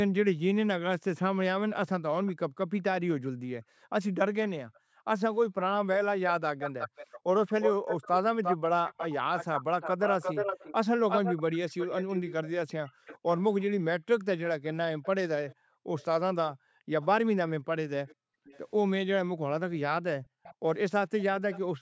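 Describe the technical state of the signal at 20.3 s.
At 20.3 s, background gated by the echo canceller is in effect from 20.22 s to the end at 21.8 s. While the far-end loudspeaker plays, the canceller pulls the microphone down by up to about 40 dB, so the room tone dips out in brief gaps totalling about a fifth of a second. Nothing is added; ambience simply vanishes and returns.

An echo leak also runs from 20.27 s to 21.6 s: a faint, delayed copy of the speech arriving 459 ms after the original, at about 20 dB below it. The cause is likely residual loudspeaker pickup that the canceller failed to remove. That fixed, distinct delay separates it from room reverberation.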